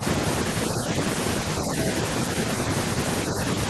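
Speech suppressed in double talk appears right at the opening, from 0.00 to 0.04 s. For about 40 ms the speech is pulled down, sinking by roughly 10 dB at its deepest before recovering. The likely cause is an echo canceller meeting both sides talking at once: unable to tell the local talker from the returning loudspeaker echo, it attenuated everything, so the first instant of speech sounds briefly ducked.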